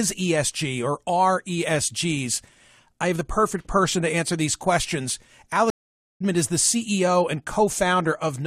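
At 5.70 s, just after "to answer these questions", a stream reconnect occurs: the connection drops, leaving 0.50 s of silence until 6.22 s. A fresh decoder then resumes mid-stream roughly 0.4 s further on, skipping audio, with the first frame faded in.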